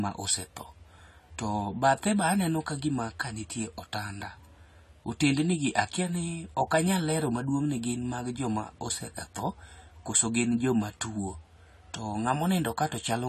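From start to finish the speech sounds dull and smeared, with nothing above 14.1 kHz and a plainly audible fizzy, warbling edge on sibilants. That's likely AAC compression: the encoder drops the top band and coarsely quantises what's left, which fits a low bitrate around 32 kbps.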